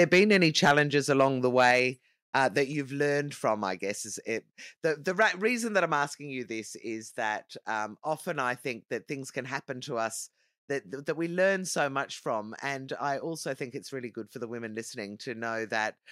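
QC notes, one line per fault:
0.0–0.8 s, 1.2–1.26 s, 1.57–1.79 s, 2.36–2.44 s, 5.21–5.25 s: microphone overload. The loudest speech peaks are flattened, giving a harsh, crackling edge. They are worst at the start, about 8 dB past full scale, and about 2–5 dB over later, with a few percent of samples clipped. The likely cause is input gain set too high for the converter.
0.71 s and 1.71 s: microphone volume stepped down. Speech and background drop together in single steps, about 2 dB then about 3 dB. Each step lands inside a clipped stretch, which likely reflects the call software cutting the microphone's input volume in response to overload.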